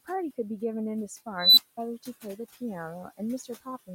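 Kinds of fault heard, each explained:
Noise suppressor artifacts: Throughout the speech, a suppressor pulls steady background down by about 13 dB between phrases, so the room noise dips in pauses and returns under the speech.
Unstable filter: From 1.36 s a recursive filter runs away. A tone at around 4 kHz swells over about 208 ms into a loud, clipped squeal. The output then overflows and drops out, leaving roughly 200 ms of silence until the filter resets near 1.77 s.
Speech cut by the noise suppressor: Between 3.44 and 3.66 s the suppressor mistakes part of the speech for noise. About a tenth of a second in total is pushed down, by up to about 15 dB at the deepest point. Those sounds come across swallowed and faint.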